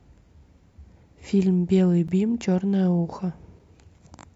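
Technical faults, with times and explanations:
2.08 s, block of digital silence: the output buffer was apparently not filled in time, so about 10 ms of speech was replaced by zeros. The sound drops abruptly to nothing and returns without a fade, so the hard edges make a brief tick.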